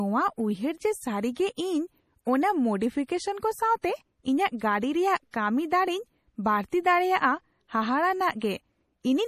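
Throughout the speech, the treble stops dead at about 15.1 kHz, and the sound has a watery, swirling quality, with metallic chirps on sibilants. This is likely MP3 compression, and its plainly audible damage fits a low bitrate around 40 kbps. Short of bits, the encoder cut everything above a fixed frequency and dropped weak spectral lines that flicker on and off between frames. Unlike broadband noise or hiss, the damage follows the signal and comes and goes with it.

From 5.31 to 5.34 s, and again from 6.69 to 6.72 s, a brief hiss runs ahead of a sharp onset and the attack itself sounds softened. This is pre-echo, with the smear lasting about 27 ms and 31 ms respectively. The codec spread quantisation noise evenly across its transform block, so noise meant for the loud attack also filled the silence just before it. A click or dropout sits on the event itself, but this fault arrives early.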